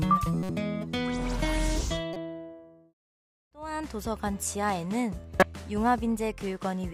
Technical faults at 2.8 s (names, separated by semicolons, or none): none